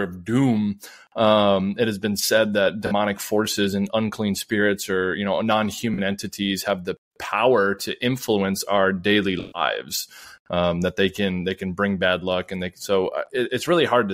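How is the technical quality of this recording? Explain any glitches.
The recording is marred by three instances of AAC frame loss with concealment. Compressed AAC frames failed to arrive, and the decoder patched each gap by rebuilding audio from the last good spectrum, so the missing speech is replaced with an estimate. The short losses, about 43 ms each (consistent with two frames), occur at 2.86–2.92 s, between "has been said that" and "forces and unclean spirits", and at 5.94–5.99 s, between "spirits or you know" and "entities have the power". These sound like brief smeared, noisy blips. The longer loss, at 9.39–9.62 s right after "influence our daily", fits about seven frames. There the concealment stretches thin, so the sound decays toward silence before fading back in.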